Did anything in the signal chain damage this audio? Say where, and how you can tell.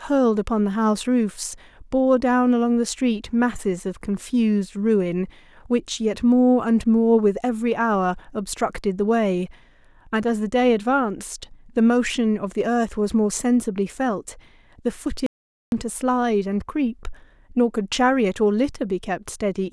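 Yes, there's an audio dropout to silence in this speech from 15.26 to 15.72 s. The sound cuts off mid-flow and drops to silence for about 0.46 s, with no room tone underneath, then comes straight back. That flat silence points to the capture stage rather than the room: the input likely disappeared briefly, through a loose connection, a failed link or a momentary mute, while the recorder kept writing silence. Whatever was said in that gap is gone.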